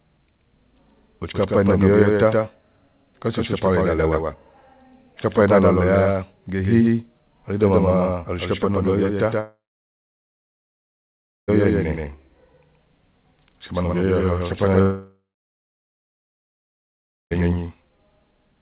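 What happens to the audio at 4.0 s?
At 4.0 s you're hearing the doubled audio track that runs through the whole clip: a second copy of the speech trails about 150 ms behind, roughly 5 dB quieter, with no room tail, likely from a slower capture path mixing it in twice.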